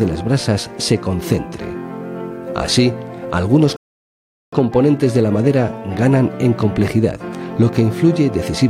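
The audio has one rebuffering stall. At 3.76 s it drops to silence. It resumes at 4.53 s, picking up exactly where it stopped. Nothing is skipped or repeated. The gap adds about 0.76 s to the running time. This is what happens when a streaming player runs out of downloaded data. Playback halts until enough new audio arrives, then carries on from the same point.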